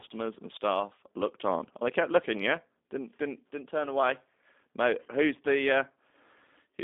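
Right from the start the whole clip carries plain G.729 codec damage: speech rebuilt from a filter and pulses at what sounds like 8 kbit/s, banded 250 Hz to 3.6 kHz, rough and slightly synthetic.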